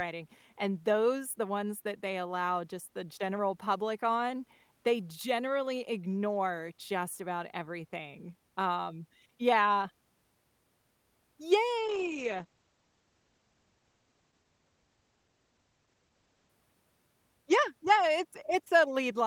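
Speech that suffers a call bitrate drop from 11.78 s to 16.57 s. The connection's bandwidth estimate fell, so the encoder was made to spend far fewer bits, and the sound coarsens and turns muffled for about 4.7 s. Its audio bandwidth narrows from around 20 kHz to 8 kHz, removing the upper range, which fits a fall from roughly 32 kbps to about 10 kbps before the bitrate recovers.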